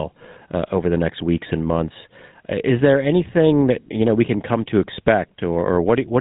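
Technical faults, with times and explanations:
Throughout, GSM full-rate codec: the speech is plainly damaged by a buzzy, gravelly roughness, and nothing comes through above 3.8 kHz. The codec rebuilds the voice from a vocal-tract model driven by a sparse, regular pulse train, so the excitation sounds coarse and grainy, consistent with the 13 kbps full-rate mode. Simple low-pass filtering at a similar cut-off would only dull the speech; this grating buzz is what marks out this codec.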